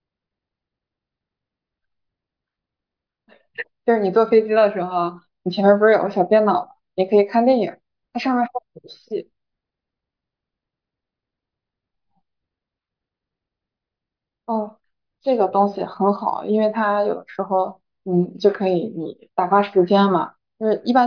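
No technical faults are audible.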